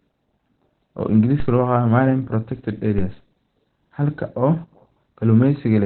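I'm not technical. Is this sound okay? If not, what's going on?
No. From start to finish the speech sounds muffled and hoarse, like an old phone line, with nothing above about 4.2 kHz. This is likely Opus compression, squeezed so hard that the encoder switched to its narrow speech mode and dropped the upper range.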